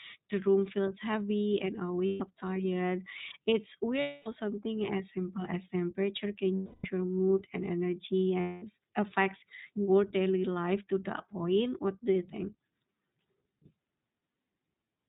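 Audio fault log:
Throughout: iLBC codec. The audio is band-limited to the narrowband range, with nothing above 4 kHz, so it sounds thin and phone-like. The coding damage is plainly audible as a slightly rough, synthetic edge on the speech. Each frame's excitation is coded on its own instead of being predicted from the previous one, which costs some smoothness. The sound points to the 15.2 kbps mode with 20 ms frames.
2.06–2.22 s, 4.00–4.28 s, 6.54–6.86 s (just before "your mood and"), 8.40–8.64 s (just before "affects your daily life"): lost iLBC frames. The four gaps last 140 ms, 260 ms, 300 ms and 220 ms. In each one the decoder fills in by repeating the last pitch cycle blended with noise, so you hear a held, slightly buzzy or breathy vowel that fades on the longer gaps. Because iLBC frames don't depend on each other, the voice comes back almost immediately afterwards.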